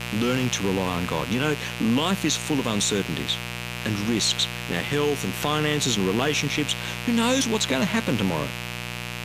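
A mains buzz runs under the speech from start to finish. It sits at roughly 10 dB below the speech. The base is 60 Hz mains. Sharp switching spikes arrive twice per cycle, so harmonics stack up well into the kilohertz range. A dimmer, rectifier or unshielded line let them in. The result is a steady, raspy buzz rather than a smooth hum.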